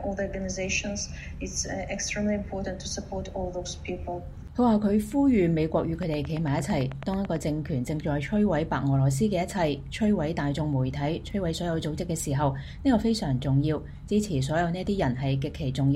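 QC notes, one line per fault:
6.03–7.37 s: train of clicks, about 15 regular ticks at 9 per second, likely nearby interference; waveform shows evenly spaced spikes, spectrogram thin vertical broadband lines.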